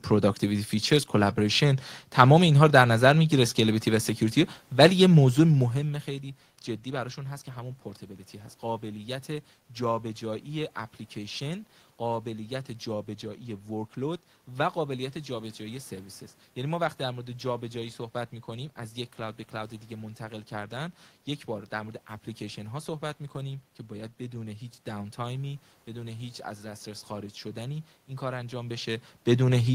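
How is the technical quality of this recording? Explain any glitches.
Nothing in the recording stood out as a technical problem on listening; the steady room noise and the talker's changes in distance from the microphone around 5 s and again near 28.5 s belong to the recording itself rather than being glitches.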